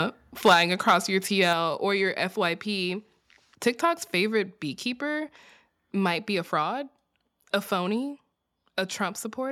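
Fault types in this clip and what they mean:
Microphone overload: Peaks flatten against the converter ceiling from 0.45 to 0.96 s and again from 1.43 to 1.53 s before "or your", adding harsh crackle. The waveform shows squared-off tops, the spectrogram broadband vertical smearing, likely from input gain set roughly 4 to 9 dB too high.
Microphone volume stepped down: Voice and background drop together by about 3 dB at 0.54 s and about 4 dB at 1.53 s, just before "or your", each right after distorted peaks, likely software cutting the device input level. The waveform envelope shrinks in one step; spectrogram energy dims uniformly.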